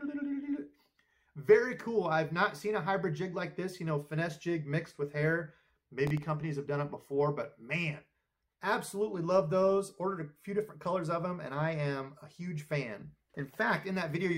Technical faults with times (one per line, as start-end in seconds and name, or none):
6.07-6.23 processor overload crackle